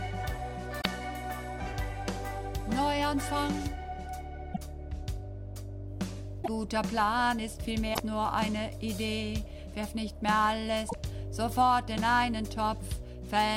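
Damaged data in a compressed stream breaks the audio five times: 0.78–0.86, 4.50–4.58, 6.40–6.48, 7.91–8.00 and 10.86–10.95 s. Each brief blip comes from corrupted frames that the decoder misreads before resyncing.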